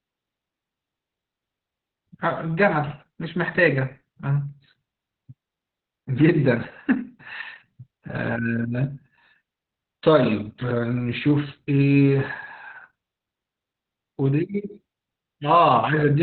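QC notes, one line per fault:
throughout: Opus voice compression. Nothing comes through above about 4.3 kHz, so the speech sounds muffled and phone-like, with a hoarse, slightly robotic edge from the SILK coder coding the excitation coarsely. The damage is heavy and fits a narrowband setting around 8 kbps.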